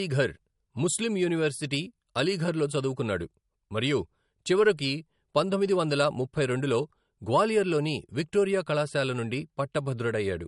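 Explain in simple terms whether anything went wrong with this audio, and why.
The speech sounds dull and swishy from start to finish, with nothing above 11.2 kHz. It's likely low-bitrate audio saved at a high bitrate, so that earlier damage remains.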